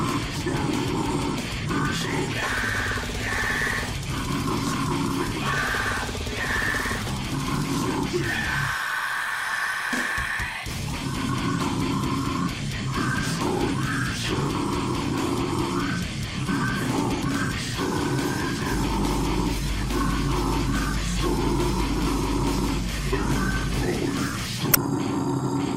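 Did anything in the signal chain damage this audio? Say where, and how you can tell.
Yes. Damaged data in the compressed stream, at the codec stage, produces a brief disturbance from 24.71 to 24.77 s. The decoder misread corrupted frames and lost sync. On a spectrogram and on the waveform, this shows as a short 60 ms disruption in the signal.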